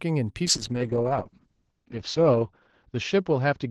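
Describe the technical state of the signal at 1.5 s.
At 1.5 s a call bitrate drop is under way, running from 0.47 s to 3.7 s. The Opus encoder falls from 64 to 7 kbps and narrows from 12 kHz to 8 kHz, so the speech sounds coarse and muffled.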